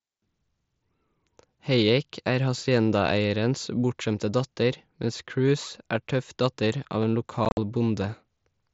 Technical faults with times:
7.45-7.57 unconcealed Bluetooth headset packet loss

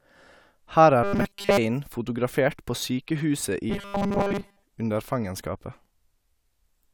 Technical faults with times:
1.03-1.57 robotic sound from repeated short buffers
3.70-4.62 robotic sound from repeated short buffers

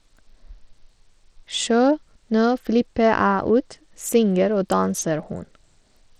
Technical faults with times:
0.00-6.19 Bluetooth SBC compression

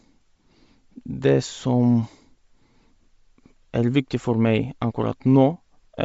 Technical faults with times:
0.00-6.04 Bluetooth LC3 compression

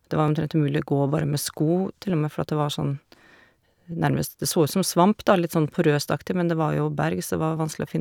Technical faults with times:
0.28-7.57 clock drift buffer slips

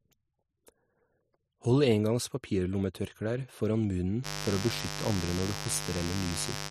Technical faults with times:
4.22-6.71 mains buzz

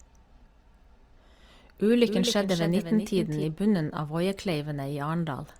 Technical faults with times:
2.06-3.44 doubled audio track

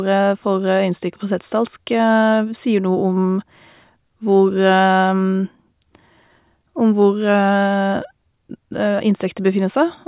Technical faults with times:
none

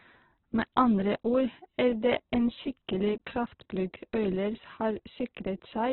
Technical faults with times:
0.00-5.93 Opus compression

